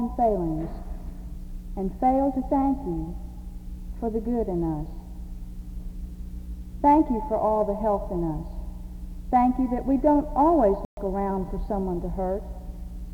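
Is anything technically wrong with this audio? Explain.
Yes. At 10.85 s the sound cuts abruptly to silence and returns at 10.97 s, a hole of about 122 ms. When it comes back it does not pick up where it stopped: the missing stretch is simply skipped, as though playback kept running through the gap. This is likely a Bluetooth dropout. Audio data failed to reach the headphones in time and was discarded, so nothing played until valid data arrived again. The gap's length fits roughly six lost packets.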